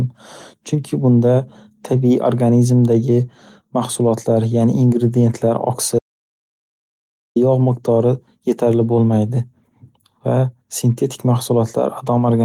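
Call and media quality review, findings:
Audio dropout to silence, 5.99 to 7.36 s: speech cuts off mid-flow, about 1.37 s of silence with no room tone, then resumes abruptly. Likely input loss upstream, a dropped device or link, with the recorder still writing silence. Content in the gap is gone.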